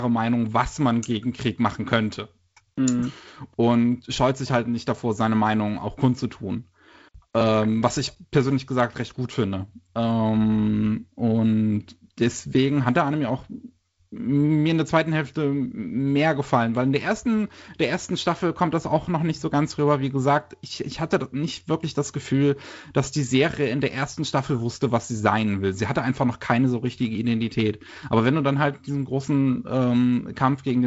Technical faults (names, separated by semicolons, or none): none